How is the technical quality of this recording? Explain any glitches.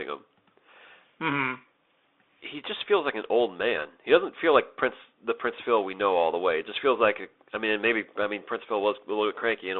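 The technical quality is poor. The speech has passed through a Bluetooth CVSD headset codec for the whole clip. The audio is confined to roughly 300 Hz to 3.6 kHz, so it sounds thin and boxed in. CVSD sends only one bit per sample, up or down, and adapts its step size. That fits a 64 kbps headset link. Fast, loud high content outruns the step. S sounds turn scratchy, and a grainy hiss sits under the speech.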